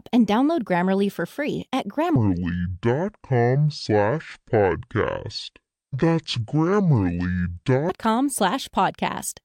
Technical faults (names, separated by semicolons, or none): section at the wrong speed